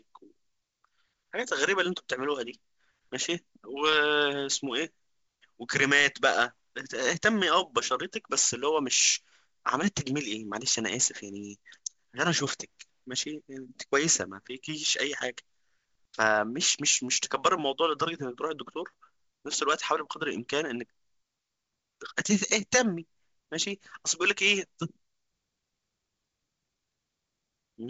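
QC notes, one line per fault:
No faults are heard in this speech clip. It carries the character of G.722 wideband telephone coding, with nothing above about 7.7 kHz, a light hiss in the upper band and a slightly noisier lower band, which fits the 56 kbit/s mode.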